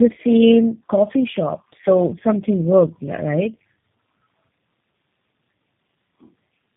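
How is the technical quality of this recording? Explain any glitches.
The quality is poor throughout, because of tandem speech coding across the whole clip. The audio sounds like it passed through several low-rate speech codecs in series, consistent with a GSM full-rate leg followed by two G.729A legs, with G.711 links between them. Each coder re-encodes the previous one's degraded output, so the errors compound. The result is rough, muffled and warbly speech, with nothing above 3.4 kHz.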